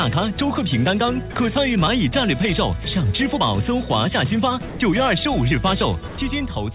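At 1.32 to 1.36 s, 4.68 to 4.80 s and 6.08 to 6.18 s, the sound briefly gives way to steady hiss. This is likely sound dropped by the voice detector, with comfort noise filling each gap. The band stays below 4 kHz throughout.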